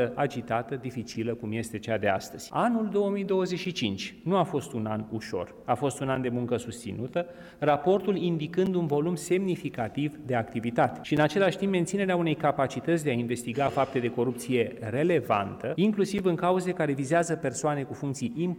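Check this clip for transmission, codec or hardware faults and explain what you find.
One fault is present: a gap between chunks, recurring seven times at 1.14, 3.65, 6.15, 8.66, 11.17, 13.68 and 16.18 s. The audio arrives in 2.5 s blocks, and each join leaves a 7 ms silence with no content lost. The result is a brief dropout at a steady 2.5 s interval.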